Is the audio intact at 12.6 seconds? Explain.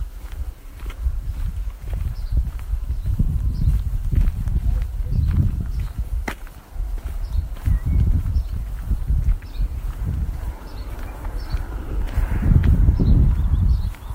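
Yes, the audio is intact at 12.6 seconds, with no audible fault at that moment.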